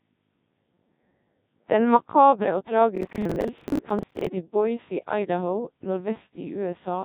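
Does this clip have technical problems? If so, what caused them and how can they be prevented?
Yes. Throughout, the Codec 2 vocoder makes the speech robotic and buzzy, with nothing above 3.8 kHz. It sounds rebuilt from sine waves rather than merely muffled. Use a waveform codec instead.

From 2.96 to 4.27 s, processor overload crackle appears as gritty tearing. Dozens of buffers of around 10 ms are missed and replay old audio, unlike a single clean dropout. Reduce processing load or use larger buffers.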